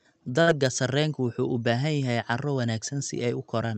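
At 0.41 s the speech briefly smears into a held, fading sound, then jumps ahead to "sarreenku wuxuu u", with the sound in between gone. This is a burst of packet loss lasting until 0.49 s: a run of packets never arrived in time, so the receiver stretched the last sound for about 54 ms while lowering it, and roughly 60 ms of speech was skipped. The call codec's band limit near 8 kHz holds throughout.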